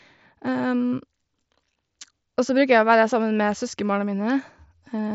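Nothing technically wrong turns up in this speech clip, which sounds like it came through a wideband Bluetooth headset link, so its top end stops at around 7.7 kHz.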